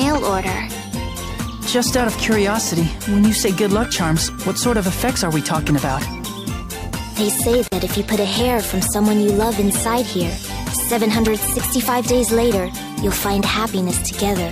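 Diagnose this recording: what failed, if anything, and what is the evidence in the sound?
A codec-stage failure: a gap at a join of encoded pieces, with the sound dropping out at 7.68 s for about 42 ms, to 7.72 s, then resuming where it stopped. Separately encoded pieces, joined every 10 s, kept their encoder start delay and final-frame padding untrimmed.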